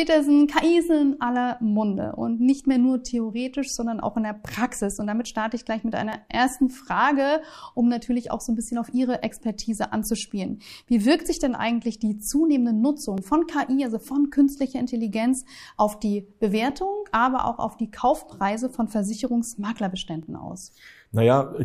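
From 2.60 s to 20.23 s, a regular click recurs about every 3.52 s, roughly seven times. This is likely clock drift buffer slips: two clocks differing by around 200 ppm, so the buffer periodically drops or repeats a few tens of samples.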